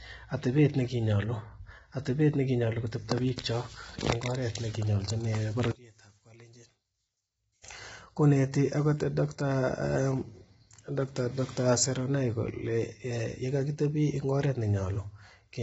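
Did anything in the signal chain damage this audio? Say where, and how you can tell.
Yes. At the codec stage, the whole clip carries heavy damage from what is likely low-delay AAC compression (AAC-ELD), at a rate that fits about 16 kbps. The speech is rough and grainy throughout, with noise filling the gaps between pitch harmonics, and nothing survives above 7.8 kHz. The codec's short frames resolve those harmonics poorly, and at such a low bitrate the encoder runs short of bits, so the upper band is dropped and the fine spectral detail smears.

Between 5.72 and 7.64 s the level falls by about 22 dB, leaving only a faint trace of the speech before it snaps back. That drop fits one channel inverted, a polarity flip most likely in the wiring or channel handling ahead of a mono sum. With one channel's polarity reversed, everything common to both channels cancels when they are added. The centred speech largely disappears, and only the small difference between the channels gets through.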